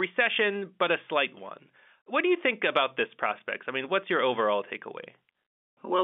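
No faults can be heard in this speech, which comes through a G.711 telephone line limited to roughly 200 Hz to 3.6 kHz, with any coding noise faint at most.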